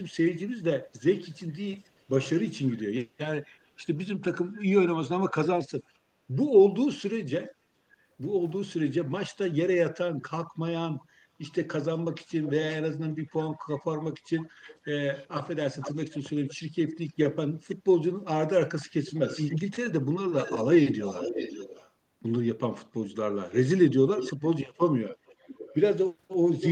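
A faint delayed copy of the speech trails the main speech from 0.08 to 5.31 s (422 ms behind, about 30 dB down), in a brief scrap at 11.44 to 11.52 s (475 ms, about 35 dB down), then louder from 12.43 to 17.77 s (497 ms, about 15 dB down), 18.8 to 21.9 s and 23.1 s to the end (528 and 556 ms, about 10 dB down). This echo leak is likely a far-end loudspeaker echo the canceller missed. A spectrogram shows fainter, time-shifted repeats of the speech harmonics, and the waveform shows residual energy after phrases end within these spans.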